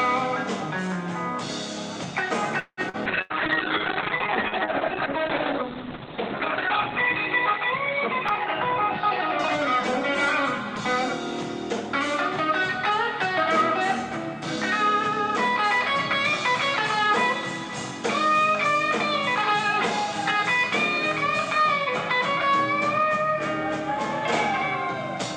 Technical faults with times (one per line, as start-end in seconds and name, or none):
2.59-3.33 repeated packet loss (robotic sound)
3.07-11.45 call bitrate drop
12.44-18.41 jitter buffer speed-up